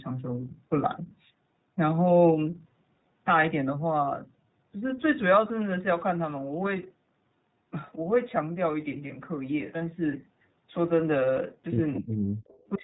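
Throughout, the speech sounds slightly rough and synthetic, with nothing above 4 kHz. This is the iLBC codec at 15.2 kbit/s, coding each 20 ms frame independently, and the damage is plainly audible.

Lost iLBC frames cause brief held, buzzy vowel-like smears at 0.42–0.44, 2.70–2.72, 4.34–4.39 (40 ms, two frames), 9.08–9.12 and 11.62–11.65 s. In each, the decoder repeated the last pitch cycle with noise, and the voice recovers almost at once.

From 11.95 to 12.00 s, a faint delayed copy of the speech appears about 224 ms behind, roughly 15 dB down. It returns, much fainter at about 30 dB down, from 12.48 to 12.69 s. This echo leak is likely a loudspeaker echo that the far-end canceller failed to remove.

The talker's voice dips by around 20 dB from 12.01 to 12.07 s and again from 12.75 s to the end. This is speech suppressed in double talk, likely the echo canceller turning everything down while both sides spoke.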